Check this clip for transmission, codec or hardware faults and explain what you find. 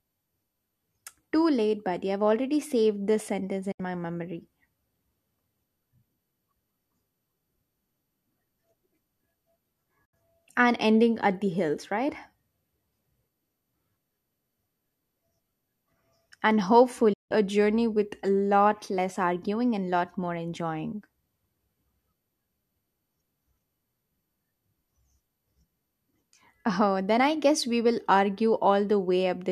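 Three digital broadcast dropouts occur in this speech. At 3.71 s, after "already saved this sentence" and before "my memory", the sound fades out in about 8 ms, mutes for roughly 90 ms, then returns. At 10.05 s, just before "and ending at the", there is the same short hole. At 17.13 s, before "journey with a lot", the hole is longer, close to 0.18 s. The receiver lost the signal or rejected corrupt frames and muted until good ones arrived. The gaps fit three and seven lost frames of about 24 ms. The audio in those gaps is gone.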